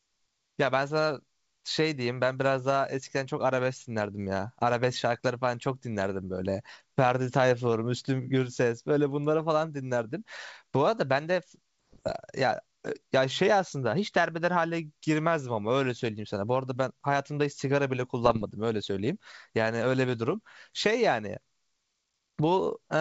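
Bits flipped on the G.722 ADPCM link at 11.93–12.16 s and again at 18.24–18.44 s, a heavier error rate in the second burst, so the decoder's step size and predictor were thrown off and kept ringing, giving pops, rough gritty bursts and brief jumps in level within the speech.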